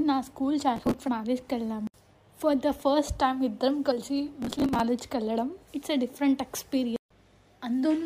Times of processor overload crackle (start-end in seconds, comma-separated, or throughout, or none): 0.76-0.94, 4.42-4.80